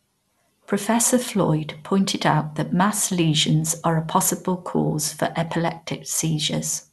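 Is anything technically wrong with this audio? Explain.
Yes. MP2 compression damage runs throughout the speech, likely from MPEG Layer II encoding at a low rate, which fits something near 80 kbps. Starved of bits, the encoder drops upper sub-bands, so nothing is heard above 12.2 kHz. The remaining bands are coarsely quantised and flicker, leaving a dull, gurgling, granular texture.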